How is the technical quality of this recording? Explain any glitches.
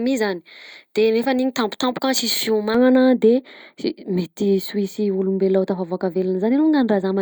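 There's one clear problem, and it sits right at the start. From 0 to 2.75 s you've got pre-emphasis left on: the treble boost, a J.17-style curve, went in without the matching de-emphasis, so 10 kHz sits about 11 dB hot relative to 1 kHz. The speech comes across thin, bright and hissy on the sibilants.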